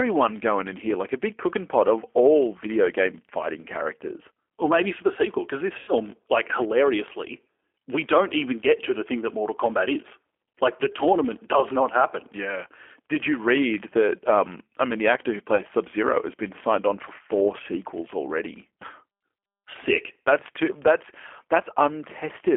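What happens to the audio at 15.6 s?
VoIP packet loss concealed by the speech codec, from 15.55 to 15.61 s: about 30 ms of audio went missing, which fits a single lost packet. The decoder kept extrapolating from its last pitch and filter while lowering the gain, so the sound smears into a short, fading buzzy tone or coloured noise and stays weak or distorted as it recovers.

Across that moment the G.729 codec is also audible. It rebuilds the signal from a vocal tract filter and a few pulses per frame, consistent with 8 kbit/s, and it confines the sound to roughly 300 Hz to 3.4 kHz, giving it a rough, synthetic edge.

A filter restarted on every block adds a 50 Hz buzz. Each block begins from silence with a small transient, and the buzz rises and falls with the signal's level.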